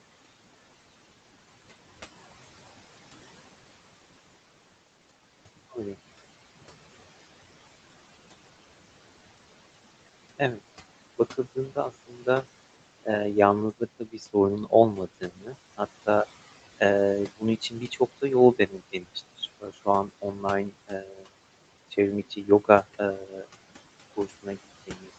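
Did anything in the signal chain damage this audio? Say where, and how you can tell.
Yes. Noise suppressor artifacts from call processing run throughout. The background drops about 17 dB between phrases, so the spectrogram's noise floor pumps in step with speech.

Speech cut by the noise suppressor occurs at 11.33–12.44, 13.79–16.07, 17.38–17.98 (before "da yol"), 18.58–21.24, 21.91–22.69, 23.26–23.45 and 24.16 to the end. Parts of the speech drop up to about 15 dB, showing as waveform dips.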